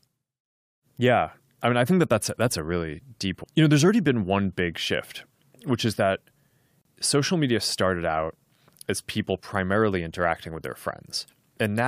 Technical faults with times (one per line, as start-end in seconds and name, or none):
6.81-6.85 gap at a join of encoded pieces